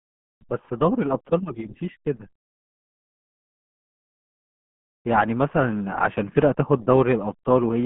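RealAudio 14.4 codec damage runs through the whole speech clip, from start to finish. The band is squeezed into roughly a telephone line's range, about 150 Hz to 3.4 kHz, with nothing at all above 3.8 kHz. The heavy coding leaves the speech muffled and gargly. That sound fits a speech codec working at around 8 kbit/s, as RealAudio 1 did for dial-up modems, discarding the high frequencies and smearing what remains.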